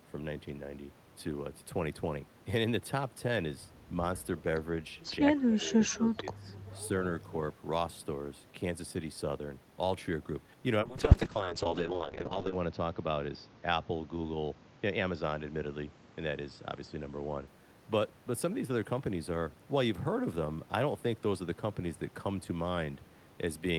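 From 5.26 to 5.77 s, speech is suppressed in double talk, likely because the echo canceller mistook overlapping talk for echo; the speech dips by up to about 15 dB. From 5.91 to 5.95 s comes an echo leak, likely residual loudspeaker pickup slipping past cancellation: a faint copy about 135 ms late, roughly 25 dB below the speech. From 5.95 to 6.5 s, a second double-talk suppression, likely the same canceller again clamping down, drops the speech by up to about 10 dB. From 10.82 to 17.53 s, a call bitrate drop forces the encoder from 40 to 6 kbps, bottoming out for 1.74 s, with bandwidth shrinking from 20 kHz to 8 kHz, so the sound turns coarse, watery and muffled.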